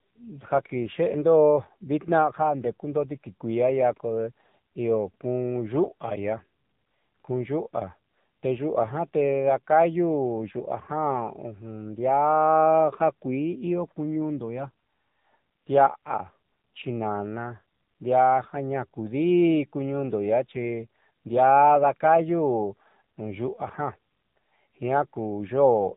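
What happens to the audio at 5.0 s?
At 5.0 s the speech is still passing through the AMR narrowband mobile codec, which affects the whole clip rather than that moment alone. The codec resamples to 8 kHz and rebuilds each 20 ms frame from a vocal-tract model excited by only a few pulses. Nothing above 3.8 kHz survives, so the sound is thin and muffled. The heavy buzzy, synthetic coloration points to one of AMR-NB's lower modes, around 6.7 kbps.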